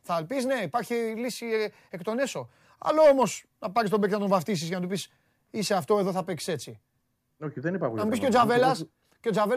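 No technical faults detected anywhere in the speech recording.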